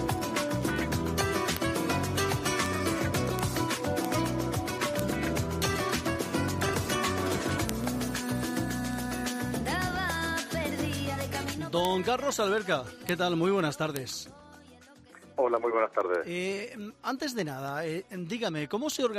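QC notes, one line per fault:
0.11–19.14 s, word clock ticks: a receiving clock roughly 300 ppm off the sender's slips about every 0.07 s, dropping or repeating one sample, heard as steady ticks.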